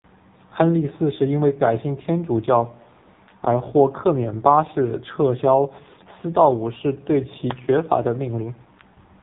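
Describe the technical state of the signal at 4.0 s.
At 4.0 s you're hearing the AMR narrowband mobile codec, and it's there for the whole clip. Nothing gets through above about 3.8 kHz, so the speech is boxed into that thin phone band. The codec rebuilds the voice from a vocal-tract model fed by a few pulses every 5 ms, and with damage this heavy the result is buzzy and synthetic. That fits a very low bitrate, around 5.9 kbps.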